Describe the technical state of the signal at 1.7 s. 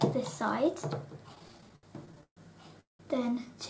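At 1.7 s the signal is in the middle of repeated stalls (stutter) running from 1.35 to 2.38 s. Packets arrived late, so the jitter buffer ran dry fourteen times, and the receiver stretched the last sound to fill about 330 ms with nothing lost. The longest gap was 132 ms. The audio drags and stutters. On a spectrogram, frozen, smeared bands repeat. The waveform shows looped stretches that sag in the longer gaps, all below the 8 kHz G.722 ceiling.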